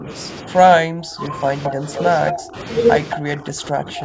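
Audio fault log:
0.0–0.09 s, 0.45–1.83 s, 2.32–2.57 s and 3.16–4.05 s, speech suppressed in double talk: the voice keeps sagging and breaking up in patches. It dips by about 15 dB at the very start, but the long stretch mid-clip drops by as much as about 25 dB. This is likely the echo canceller hearing both ends at once and clamping down on everything, so the near talker gets ducked along with the echo.
1.63–2.33 s and 3.1–3.17 s, echo leak: a delayed copy of the voice comes back about 223 ms late. The first, longer stretch is loud, only about 5 dB under the speech, and the short one at 3.1 s sits about 10 dB down. That's likely a speakerphone's canceller letting part of the loudspeaker pickup slip through, and it's being sent straight back.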